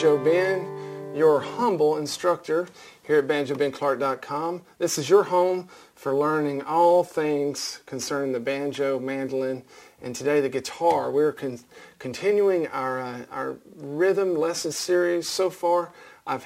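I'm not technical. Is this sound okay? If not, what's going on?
No. Throughout the clip, a gritty fizz rides on top of the sound, growing more noticeable on loud and bright moments. It doesn't belong to the sound itself and carries tones that don't fit it. This is crude rate conversion: the audio's speed setting was changed by simply dropping or repeating individual samples instead of smoothing properly, which fits a conversion from 48 kHz to 44.1 kHz. That skipping repeats in a regular pattern, creating the buzz.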